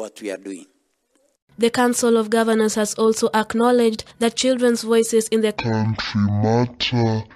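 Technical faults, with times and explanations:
1.42–1.48 s: gap at a join of encoded pieces. A 52 ms silence cuts into otherwise continuous sound, with hard edges blurred by the codec, and the audio then resumes exactly where it broke off. This happens when separately encoded segments are butted together without trimming: the encoder's start-up delay and the padding of the final frame remain at the seam and play back as a short hole rather than as missing material.
5.57 s to the end: section at the wrong speed. From this point the audio plays at roughly half speed (0.507×), so everything is stretched out and drops by about ten semitones, with tempo and pitch falling together at a single instant. Because time and pitch shift as one, this is a playback-rate change rather than a deliberate effect, likely from this portion being run against the wrong clock during editing or playback.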